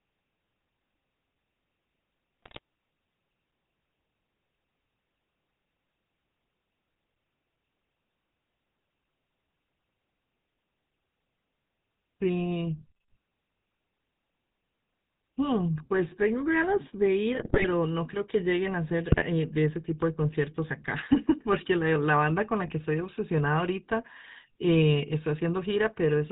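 The whole clip carries the sound of the GSM full-rate codec. The speech is buzzy and gravelly. Nothing comes through above 4 kHz. The coder rebuilds the voice from a vocal-tract model driven by sparse pulses, which fits the 13 kbps full-rate scheme.

GSM bit errors break in four times: 2.42 to 2.59 s, 17.34 to 17.67 s, 19.10 to 19.24 s, and 22.66 to 22.73 s. Corrupted filter, pitch and gain values warp the decoded frames. The speech turns to squawks, pops and gargling.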